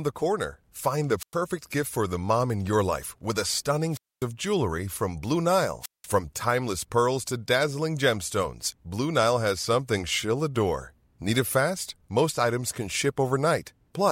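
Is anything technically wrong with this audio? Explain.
Yes. There are three wireless microphone squelch dropouts. The radio link fades until the receiver's squelch shuts the output, so hiss swells briefly and the speech falls into near silence before returning. This happens at 1.18–1.36 s, just before "gift for the mom", with a mute of about 100 ms. It happens again at 3.90–4.26 s, between "your life with a" and "jewelry from", muting for about 250 ms. The last is at 5.80–6.08 s, just before "timeless pearls to dazzling", muting for about 190 ms.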